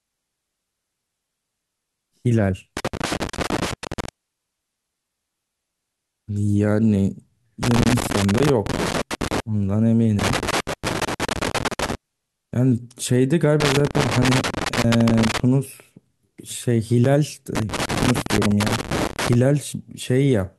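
Loose connector crackle appears at 2.77–4.09 s, 7.63–9.40 s, 10.19–11.95 s, 13.60–15.40 s and 17.55–19.35 s. A worn contact keeps making and breaking, chopping the speech, so each stretch sounds like an irregular scratchy burst.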